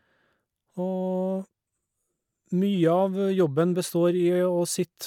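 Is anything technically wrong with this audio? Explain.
No, nothing technical stands out here; the speech comes through without any problems worth pointing out.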